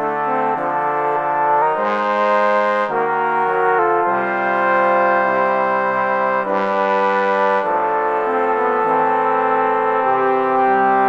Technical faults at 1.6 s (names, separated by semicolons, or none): drift correction step